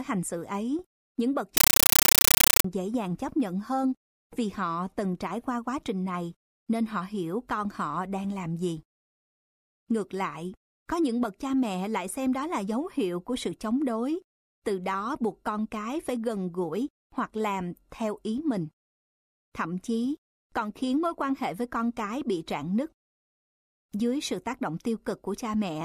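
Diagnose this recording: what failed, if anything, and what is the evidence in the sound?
The playback stage failed, at the digital link. After "xử ấy những bậc", from 1.57 to 2.64 s, the speech gives way to very loud, chattering static until "dễ dàng chấp nhận". This is a compressed stream played as audio. The receiver took encoded data for ordinary samples and did not decode it. Each frame arrives as a burst of noise about 9.3 ms long, then zero padding. The bursts repeat 31.25 times a second, which points to an AC-3 stream.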